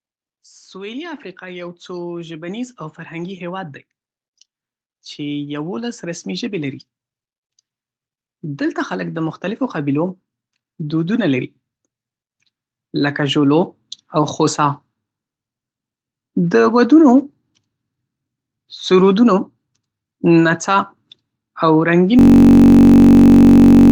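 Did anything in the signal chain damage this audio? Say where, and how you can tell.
Yes. The call processing stage has automatic gain rising three times. From 0.71 to 3.76 s the level climbs about 6 dB, from 5.15 to 6.86 s about 4 dB, and from 12.91 to 14.85 s about 3 dB. The speech and the background swell up together, so that's the gain control slowly turning things up.

The second one is at the driver or buffer stage. From 22.19 s to the end there's a system hang loop. A 21.33 ms slice repeats exactly and comes out as a steady 46.9 Hz buzz, which fits a 1024-sample buffer being replayed while the system sat frozen. You can also hear the call codec's band limit at 8 kHz.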